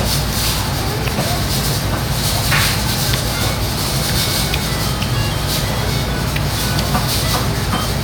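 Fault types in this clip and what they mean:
No audible technical faults: no dropouts, clicks, clipping or other defects in the sound.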